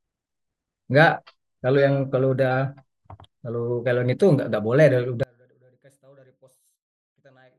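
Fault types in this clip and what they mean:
Audio dropout to a faint residue: at 5.23 s the speech cuts off abruptly and never returns. From there to the end, only a faint sound remains, roughly 35 dB below its normal level. The likely cause is a break in the feed while the path after it stayed live. On a waveform, the envelope collapses in one step to a thin, low band. On a spectrogram, the energy vanishes at a sharp vertical edge, leaving only pale, low-level content.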